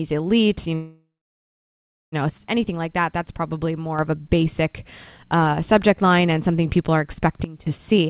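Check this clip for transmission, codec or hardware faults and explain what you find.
Three kinds of fault are audible, heard through a narrowband call path that stops at 4 kHz, consistent with G.711 A-law at 64 kbps.

Call audio freeze, 0.74 to 2.15 s: the sound trails off as a fading continuation, then holds about 1.06 s of silence before resuming where it stopped. Nothing is lost; about 1.38 s of delay is inserted, likely from stalled packets draining the jitter buffer. A dropout would skip material instead.

Sudden gain jump, 2.29 to 3.99 s and 7.44 to 7.67 s: level drops abruptly, by about 6 dB and then about 16 dB, with background noise falling equally. This is likely a digital gain change applied without a ramp. Unlike a fade or compression, the step is instantaneous.

Jitter buffer speed-up, 7.91 s to the end: the audio runs at 163% speed without rising in pitch, as short pitch-period slices totalling about a tenth of a second are cut to shrink excess buffered delay. 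Resampling would raise the pitch as well.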